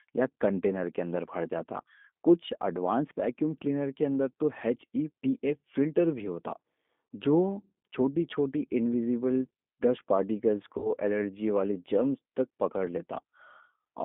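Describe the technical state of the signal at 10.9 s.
At 10.9 s the signal sits at the tail of a VoIP packet loss concealed by the speech codec, spanning 10.78 to 10.92 s, between "چھوٹی انویزیبل ڈسٹ پارٹیکلز" and "الرجی والی جرمز تک". About 60 ms of audio went missing, which fits three 20 ms packets. The decoder kept repeating its last pitch and filter at falling gain, so the gap is filled with a short, fading synthetic sound. A spectrogram shows smeared, flat content that dims toward silence, and the waveform shows shrinking amplitude.

Underneath, G.729 codec damage runs the whole time and is plainly audible. Each 10 ms frame is rebuilt from a vocal tract filter and a few pulses, which fits an 8 kbit/s bitrate and gives a rough, synthetic texture. The spectrogram has a hard ceiling near 3.5 kHz and a floor around 200 Hz.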